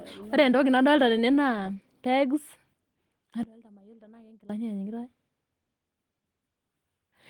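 From 3.43 to 4.49 s the speech suddenly drops by about 22 dB and goes faint and distant, with little of the centred voice left. That points to one channel inverted, which is likely the cause: with reversed polarity, the shared centre content cancels when the channels are summed to mono.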